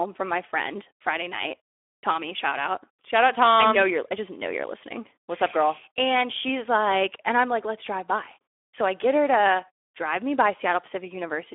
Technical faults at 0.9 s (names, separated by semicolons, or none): Speex codec